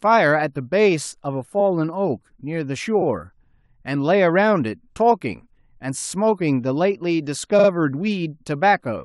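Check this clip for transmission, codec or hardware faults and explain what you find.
The clip has one fault type, repeated frames, occurring four times in the speech.

Repeated frames occur at 1.59–1.61 s, 3.01–3.05 s, 5.98–6.03 s and 7.58–7.68 s. A run of compressed frames was delivered more than once, so the decoder replays the same slice of audio. Each block is 23.2 ms long, which fits 1024-sample frames at 44.1 kHz. The first event repeats one block once. The second repeats two blocks once. The third plays one block twice more. The fourth plays two blocks twice more, adding 92.9 ms. Each sounds like a brief stutter, and the clip grows slightly longer.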